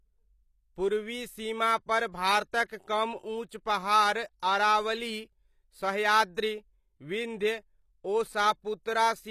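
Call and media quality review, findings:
Speech throughout: gritty, lispy sibilants, metallic sheen on the top end; likely cause HE-AAC compression, codec damage plainly audible. Band replication copies lower bands upward, so harmonics misalign above the crossover. Sound suggests a low bitrate, near 24 kbps.
Spectrogram: hard ceiling at 14.9 kHz with nothing above; upper band shows repeated, smeared copies of lower-band texture instead of clean harmonic lines.

Pre-echo at 2.65–2.70 s: hiss ahead of a sharp speech onset, 46 ms spread. Transform codec quantisation noise fills the quiet block start before the attack. Waveform: low noise floor lifting before the transient. Spectrogram: broadband haze leading the onset.
Pre-echo at 4.40–4.43 s: shorter, 24 ms smear before the attack; same mechanism, softened onset.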